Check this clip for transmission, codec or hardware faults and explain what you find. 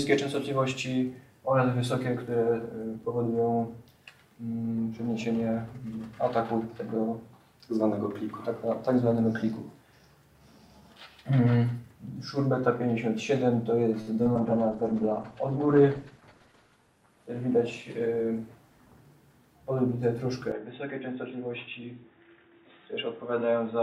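Several faults cluster between 14 and 19 seconds, and a final change in tone arrives near the end.

At 14.01–14.09 s there is a short stall from a late packet. A packet arrived late and the jitter buffer ran dry, so the receiver held the last sound for about 55 ms, then resumed exactly where it left off. Nothing is lost, but that moment drags with a faint buzzy sustain.

Two short concealed packet losses follow at 14.23–14.27 s and 14.33–14.37 s. About 20 ms of audio never reached the decoder each time, and extrapolation patched the gaps. Each patch is heard as a quick smear or wobble where the real detail is gone.

From 14.38 s to 18.8 s a call bitrate drop occurs. The bandwidth estimate collapsed and the encoder was forced far below its starting rate, roughly what a fall from around 96 kbps to near 13 kbps would produce, with the worst stretch lasting about 2.2 s. The top end shrinks from 20 kHz to 12 kHz, and the sound turns coarse and watery until it recovers.

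Inside that stretch, at 16.10–16.47 s, comes a jitter buffer speed-up. The buffer had grown too full, so the receiver trimmed about 50 ms in small pitch-period slices. Playback runs at about 111% speed with unchanged pitch, and the sound feels briefly rushed.

From 20.52 s to the end, the input was likely switched to a poorer device. With no gap at the switch, everything above 3.8 kHz disappears and the level falls by roughly 5 dB. A new noise floor sits around 50 dB below the signal, and the tone becomes dull and boxy.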